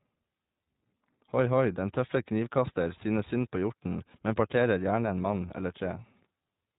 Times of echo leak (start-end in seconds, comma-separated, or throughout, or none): none